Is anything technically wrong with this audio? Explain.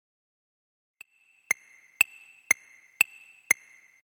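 No, nothing is technically wrong with this audio.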